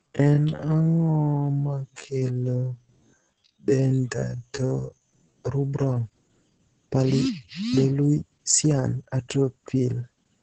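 From 0 to 5.36 s the speech runs at about 0.56 times normal pace, but its pitch is unchanged. This is a time-stretched section. Software likely lengthened the audio by repeating short pieces. The result drags.

Opus voice compression affects the whole clip. The speech is muffled, hoarse and slightly robotic. Nothing is heard above 8 kHz. The coarse, heavy damage points to Opus's SILK voice coder running at a low bitrate, around 10 kbps.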